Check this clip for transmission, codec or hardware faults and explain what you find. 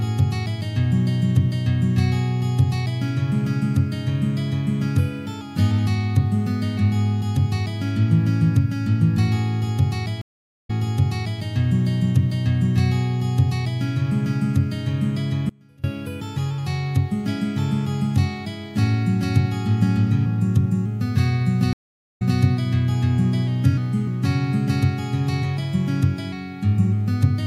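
Three faults are audible: two stream reconnects and one short audio dropout to a faint residue.

Stream reconnect, 10.21 to 11.41 s: the sound stops dead for about 475 ms, then resumes roughly 720 ms earlier than where it broke off, so a stretch just heard plays again. The same happens at 21.73 to 22.40 s, with a silence of about 476 ms and a repeat of about 192 ms. Each time the connection dropped, the player went quiet, reconnected and started a new decoder partway through the stream. The server then resent a burst of already-played material, which produces the backward jump.

Audio dropout to a faint residue, 15.49 to 15.84 s: for about 343 ms the sound abruptly collapses to a faint trace roughly 30 dB below its normal level, then snaps straight back. The cut is sudden, with no fade in or out, so it does not sound like a natural pause. The likely cause is a brief loss of the signal upstream while the path after the break stayed live and let through a small leak of the audio.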